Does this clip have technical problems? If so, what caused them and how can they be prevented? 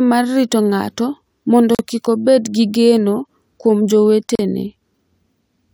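Yes. The speech drops out twice in a gap at a join of encoded pieces: a silence of about 41 ms from 1.75 to 1.79 s, between "mar rito ng’ato mondo" and "kik obed gi geno", and about 37 ms from 4.35 to 4.39 s, after "obed gi geno kuom". Each gap has smeared edges before the sound resumes where it left off. Separately encoded segments were joined with each encoder's start-up delay and final-frame padding left in place. This can be prevented by trimming the encoder delay and padding before joining, or by encoding the whole recording in one pass.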